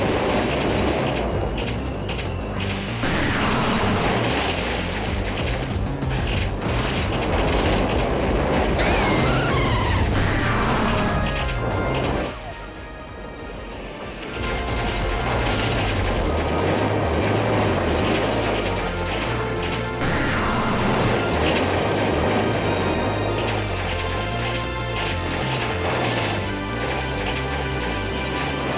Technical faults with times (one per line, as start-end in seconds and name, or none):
none